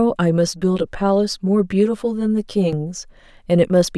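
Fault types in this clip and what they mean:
Channel delay (comb filtering): One channel arrives about 10 ms behind the other, and the two are summed to mono. Shared content cancels at evenly spaced frequencies, the first near 50 Hz. From 0.47 to 2.73 s, the speech sounds hollow and phasey.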